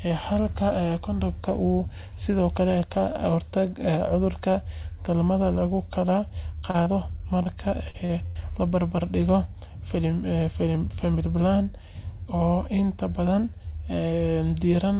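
At 6.59, 6.71, 6.83, 7.43, 7.90 and 8.06 s, short concealed packet loss leaves roughly 30 ms holes, each bridged by extending the preceding sound. Each gap is heard as a brief smear or wobble, not a dropout. Then at 8.26 to 8.38 s, a burst of packet loss removes about 90 ms. The fill is held longer and fades into a buzz or hiss, and the sound resumes further on. The whole clip passes through a narrowband call path with nothing above 4 kHz.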